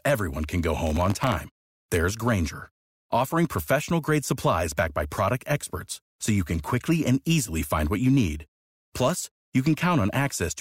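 A speech recording with gritty crackle from 0.87 to 1.35 s: processor overload crackle, where dozens of very short buffers missed their deadlines and dropped out as tiny silent gaps.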